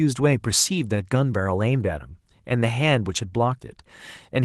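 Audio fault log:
No faults are heard in the speech. The Opus voice compression keeps the full audio band, and its light coding texture fits a hybrid setting at around 20 kbps.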